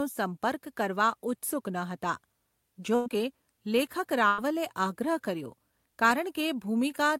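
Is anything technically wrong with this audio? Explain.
Yes. At 2.95 to 3.09 s and 4.27 to 4.50 s the speech smears into a held, fading sound for about 0.1 s, then jumps ahead. Each is a burst of packet loss: the receiver extended the last audio while about 60 ms went missing. From 3.09 to 3.28 s and 5.72 to 6.17 s the speech sounds hurried at unchanged pitch, about 118% and 109% speed. This is a jitter buffer speed-up, trimming short pitch-period slices, roughly 40 to 50 ms in all, to cut the built-up delay.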